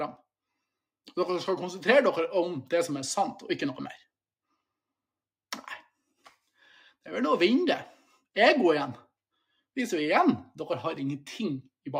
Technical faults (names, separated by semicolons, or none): none